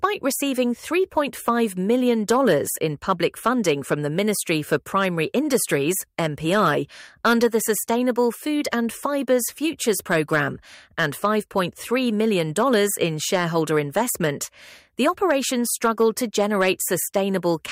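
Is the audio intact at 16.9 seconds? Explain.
No. Hard clipping runs through the whole clip, so it is present at 16.9 seconds as well. The signal is driven about 5 dB beyond what one stage can pass, and the peaks that exceed the limit are sliced off flat. Only a small fraction of samples are affected, so it is heard as brief crackle on loud peaks. The waveform shows flat-topped peaks, and the spectrogram shows vertical streaks of high-frequency energy at each peak.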